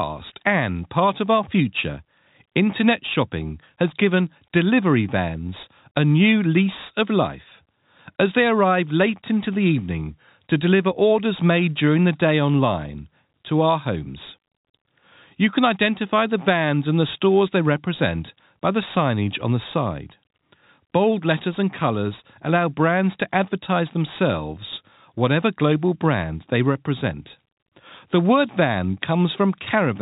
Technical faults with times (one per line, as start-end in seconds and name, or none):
none